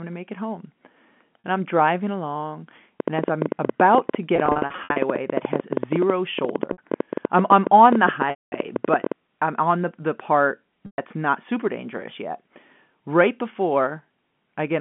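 At 1.44 s the first packet loss with pitch repetition occurs. About 40 ms of audio is missing, and the receiver covers it by looping the last pitch period, so the sound briefly holds on a slightly buzzy tone. The same concealment returns at 4.36 to 4.96 s, where about 300 ms is lost in scattered gaps of up to 60 ms across roughly 600 ms. It happens again at 6.72 to 6.78 s (60 ms), 8.30 to 8.52 s (220 ms), and 10.86 to 10.98 s (120 ms). The loss sizes fit 20 ms packets. On a spectrogram, each patch shows frozen, evenly repeated harmonics. The longer ones fade toward silence over about 50 ms before a short cross-fade back. In the waveform, identical cycles repeat in a row.

From 3.00 to 9.13 s a train of clicks runs over the sound, in pauses as well. There are around seventy sharp ticks at about 11.4 per second, spaced irregularly, with peaks on the order of 15 dB above the signal. This points to a likely cause in interference from nearby equipment or a faulty connection or power supply. 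In the waveform the clicks appear as similar narrow spikes. On a spectrogram they show as thin vertical lines spanning the whole band, which stops near 3.4 kHz on this G.711 telephone line.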